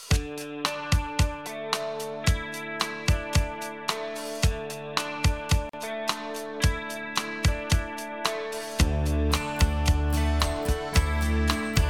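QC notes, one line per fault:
5.69–5.73 s, gap at a join of encoded pieces: a 41 ms gap opens mid-sound, likely from untrimmed encoder delay and padding, showing as a blank vertical band with smeared edges.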